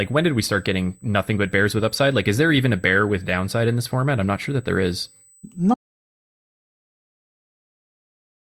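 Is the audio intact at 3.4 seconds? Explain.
No. At 3.4 seconds, as everywhere in this speech clip, a USB whine sits under the signal: a steady, fixed-pitch tone at 8 kHz, roughly 35 dB below the speech. The USB bus draws current in bursts every 125 microseconds, one per microframe, and that periodic load has coupled into the audio path through the shared power or ground. The result is a thin, high whistle that persists from start to finish.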